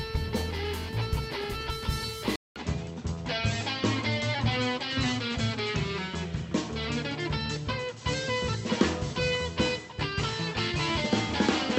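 At 2.36 s a 200 ms gap, then everything above 7.9 kHz vanishes and faint new background noise appears, likely the input switched to a poorer device.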